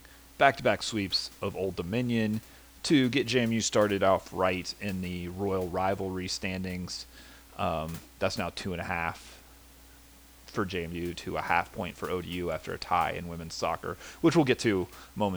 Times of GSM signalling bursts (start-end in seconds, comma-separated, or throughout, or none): none